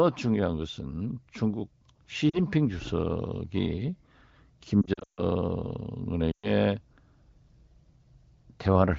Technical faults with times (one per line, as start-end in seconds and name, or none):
2.29-2.40 lost AMR speech frames
4.82-5.24 lost AMR speech frames
6.32-6.50 lost AMR speech frames